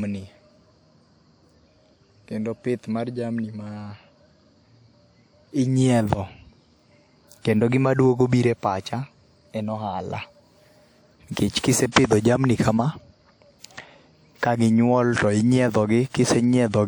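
In a speech recording, three attacks at 11.32, 11.60 and 11.92 s are preceded by brief hiss lasting 34 to 45 ms: pre-echo, where block-based codec quantisation noise spreads ahead of each transient.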